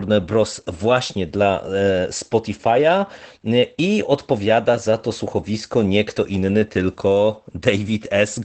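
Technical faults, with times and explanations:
Throughout, Opus voice compression: the speech has no content above about 8.6 kHz, which fits the wideband limit of Opus's SILK linear-prediction coder. The damage is plainly audible. Sibilance loses its air, and the speech sounds muffled, hoarse and faintly robotic. These are signs of an excitation signal coded with too few bits, as a bitrate around 12 kbps would do, and each frame's prediction model only approximates the true voice.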